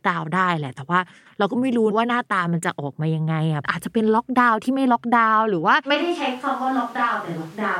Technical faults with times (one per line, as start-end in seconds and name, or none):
5.96-7.80 switch to a distant microphone